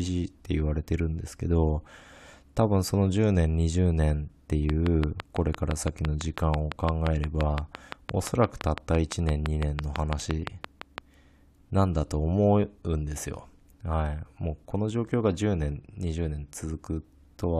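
Speech with a train of clicks from 4.70 s to 10.99 s. Regular ticks arrive at about 5.9 per second, some forty in all. They peak roughly 15 dB above the speech and sit over pauses too. Interference from nearby equipment or a faulty connection or power supply is the likely source.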